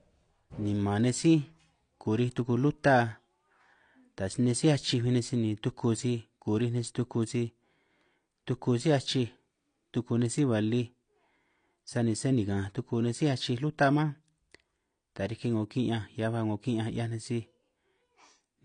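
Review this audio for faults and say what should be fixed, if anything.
The speech has a dull, smeared quality from start to finish, with nothing above 9.8 kHz and a warbling texture on sibilants. This is likely AAC compression: the encoder quantised each frame against a hearing model and discarded the top band and weaker detail, consistent with AAC-LC at around 32 kbps. A spectrogram would show a hard ceiling at 9.8 kHz and patchy, holed bands below it. Re-encode from the original source at a higher bitrate, or deliver it uncompressed.

From 0.15 s to 18.47 s there are faint, regular clock slip clicks, roughly every 0.3 s, about fifty in all. They are likely caused by two devices running on unsynchronised clocks that differ by something around 70 ppm, so each time the drift reaches a whole sample, one is dropped or repeated. On the waveform each slip appears as a tiny single-sample step, and on the spectrogram as evenly spaced thin vertical lines that are clearest in loud passages. 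Lock both devices to a common word clock, or use a proper sample-rate converter between them.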